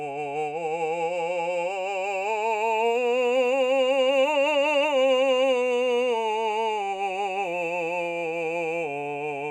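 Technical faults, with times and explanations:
No technical faults can be heard in this music clip; the signal stays stable and intact throughout.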